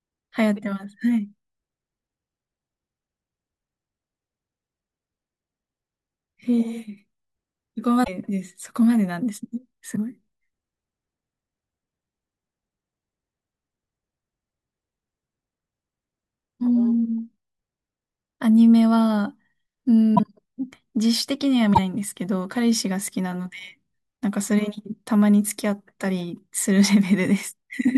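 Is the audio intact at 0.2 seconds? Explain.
Yes, at 0.2 seconds the speech comes through intact, with no dropout, click, distortion or other technical fault at that point.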